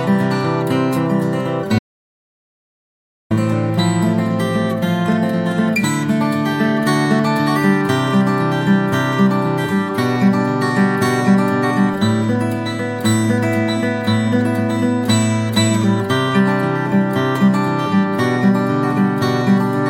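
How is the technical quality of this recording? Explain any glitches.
There is one glitch, an audio dropout to silence from 1.79 to 3.31 s. The input likely cut out while recording continued. About 1.5 s becomes total silence, with no room tone.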